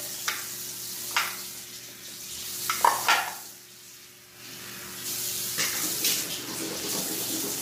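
Throughout, the audio sounds rough and grainy, with noise filling the gaps between tonal components and a thin, synthetic top band. This heavy damage is likely low-delay AAC compression at a low bitrate, around 24 kbps. Its short frames are what distinguish it from ordinary AAC smearing.

From 6.44 s to the end at 7.61 s, a train of clicks ticks over the sound at about ten per second, irregularly spaced. There are about fifteen clicks, each several decibels above the signal. Their near-identical shape separates them from random crackle and points to likely external interference.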